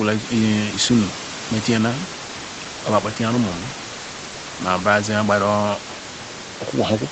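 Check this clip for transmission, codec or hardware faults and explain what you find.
No faults found.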